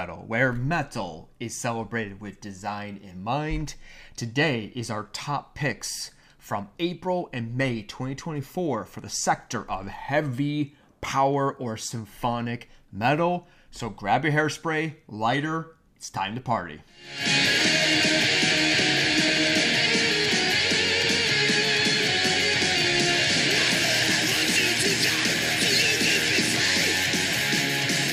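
No technical faults are audible.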